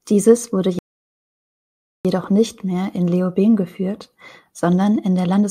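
At 0.79 s the speech halts in a rebuffering stall: playback ran dry and waited for more data, leaving 1.26 s of dead silence until 2.05 s. It then resumes seamlessly, nothing missing. The waveform shows a flat gap; the spectrogram, a blank vertical band.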